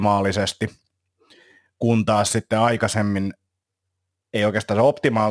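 Aliasing runs through the whole clip, from the first syllable to the last. The spectrum stops dead at 11 kHz, which fits a drop to a sample rate of about 22 kHz with no low-pass filter before it. Everything the speech had above 11 kHz has folded back down into wrong frequencies, sitting roughly 25 dB under the voice. You hear it most on the s and sh sounds, which come out gritty and metallic rather than clean.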